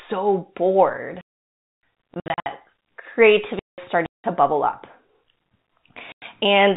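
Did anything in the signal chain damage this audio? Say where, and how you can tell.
Yes. Digital wireless dropout, 1.21 to 1.83 s (about 620 ms) and 3.59 to 3.78 s (about 190 ms), at the radio link. The receiver lost too much data and muted behind a very short fade, leaving clean near-silence with no noise burst on either side.

Packet loss filled with silence, on the network leg of the 4 kHz-limited G.711 telephone path, at 2.14 to 2.46 s (200 ms lost in runs up to 60 ms), 4.06 to 4.24 s (180 ms), and 6.12 to 6.22 s (100 ms). The receiver played silence for missing packets, and the hole lengths fit 20 ms packets.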